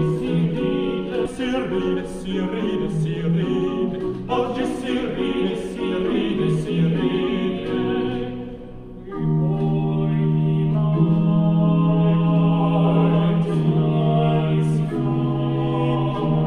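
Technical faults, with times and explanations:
1.25–1.27 s, skip ahead: Playback jumps forward with no filled gap, so about 0.7 s of sound is simply missing and the two sides are joined almost directly. Unlike a dropout, no silence or concealment covers the loss, and the latency falls by the same amount.
2.67–3.37 s, jitter buffer speed-up: The receiver, holding more buffered audio than it wanted, trimmed short pitch-period pieces repeatedly, removing a few tens of milliseconds in total. The sound runs about 4% fast at unchanged pitch, unlike a resampling error, which would raise the pitch too.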